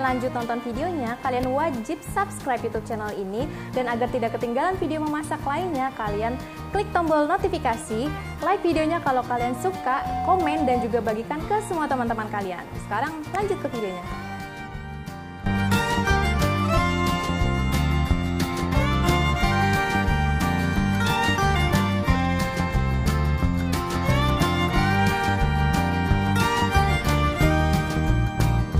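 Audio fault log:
9.31–10.88 s loudspeaker feedback squeal: mic–speaker loop gain exceeds one at 743 Hz, so a tone swells over about a second to roughly signal level; spectrogram shows a single bright horizontal line.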